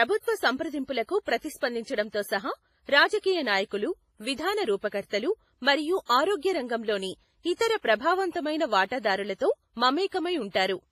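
Throughout the speech, nothing sounds above 15.4 kHz and a smeared, watery texture persists, likely low-bitrate audio saved at a high bitrate as MP3.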